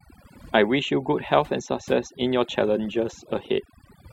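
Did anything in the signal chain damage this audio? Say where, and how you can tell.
Yes. Throughout the speech, the gaps fall to near silence dotted with twinkling specks. That is overdone noise removal at the processing stage: an over-aggressive suppressor pulls down any frequency band near its noise estimate, taking quiet speech detail with it.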